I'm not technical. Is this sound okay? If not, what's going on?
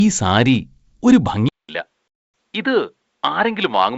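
No. From 1.49 s to the end, the speech suddenly turns duller and slightly quieter, with a brief silence of about 0.2 s at the change and nothing above roughly 4.3 kHz afterwards. The likely cause is an input switched to a poorer device, such as another microphone or a headset's call mode.

Between 2.08 and 2.34 s there is an abrupt hole of about a quarter of a second. This is packet loss on an ADPCM call: chunks of audio never arrived, silence filled the gap, and the decoder had to catch up with the sender afterwards.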